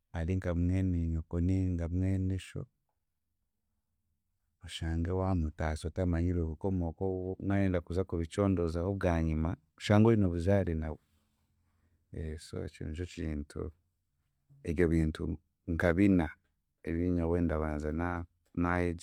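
Nothing goes wrong technically anywhere in this bit of speech, so there's nothing to flag.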